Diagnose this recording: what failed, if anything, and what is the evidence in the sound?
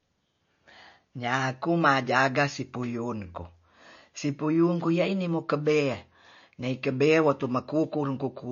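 MP3 compression throughout the speech, at the codec stage: nothing remains above 6.9 kHz, and the audio carries plainly audible watery swirl and smeared consonants. That is likely a starved encoder cutting the treble and dropping weak spectral lines frame by frame, which fits a bitrate near 34 kbps.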